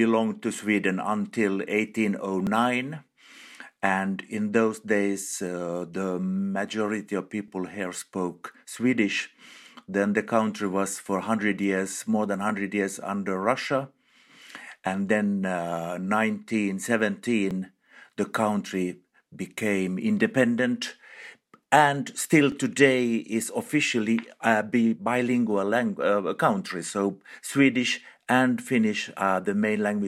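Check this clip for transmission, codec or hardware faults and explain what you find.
One fault appears: overlapping chunks, at 2.47, 7.48, 12.49, 17.51, 22.52 and 27.53 s. The audio was handled in 5.0 s chunks, and each new chunk begins about 13 ms before the previous one finished, so that sliver plays twice at every join. It sounds like a brief click or tiny stutter recurring every five seconds. Unlike a dropout, nothing is missing: a fragment is repeated, and the strict spacing points to chunk boundaries rather than random glitches.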